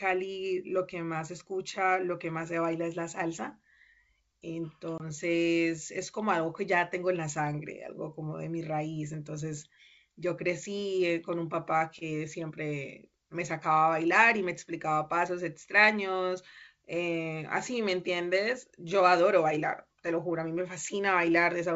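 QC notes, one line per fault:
4.98–5.03 s, packet loss on an ADPCM call: one packet's 20 ms drops to hard silence; the desynchronised decoder predictor leaves speech slightly distorted on return.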